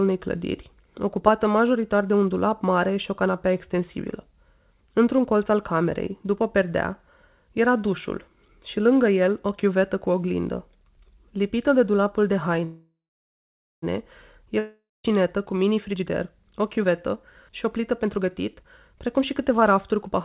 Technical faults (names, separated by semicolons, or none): call audio freeze; long network dropout; jitter buffer speed-up